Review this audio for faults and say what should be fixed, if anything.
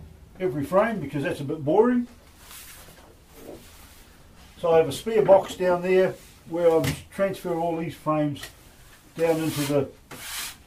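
DAB burbling from 5.43 to 5.52 s: brief noise blips in single sub-bands as bit errors from weak reception get past the error correction into the audio data, unlike steady codec swirl or silent dropouts. Better antenna placement or stronger reception prevents it.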